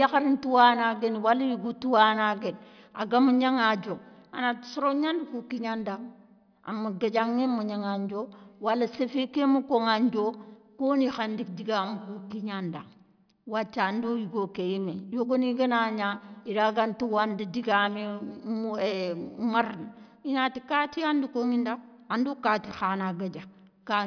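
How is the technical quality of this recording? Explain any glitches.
No audible technical faults here.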